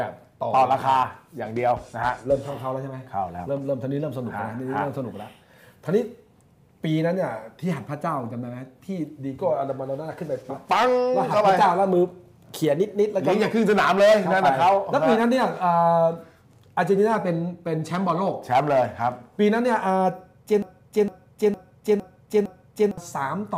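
From 20.62 to 22.98 s, a broken-record loop: a 0.46 s fragment repeats exactly five times, undecaying unlike echo, likely a stalled player, encoder or stream.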